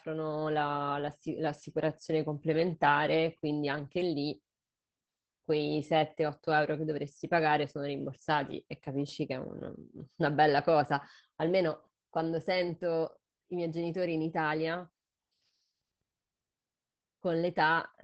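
Speech that sounds muffled, slightly hoarse and faintly robotic from start to finish, with nothing above about 8 kHz. This is Opus voice compression, with plainly audible codec damage. The missing top band points to wideband operation, and the coarse, buzzy texture fits SILK linear-prediction coding at a low bitrate of roughly 12 kbps. At that rate the excitation signal is quantised so roughly that fine harmonic detail is lost.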